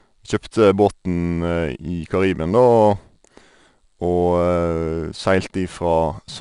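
4-bit ADPCM compression runs through the whole speech clip. Each sample is coded as a coarse 4-bit step from a predicted value, so a gritty hiss rides on every loud syllable and attacks distort. Nothing reaches above 10.6 kHz, which fits a low sample rate.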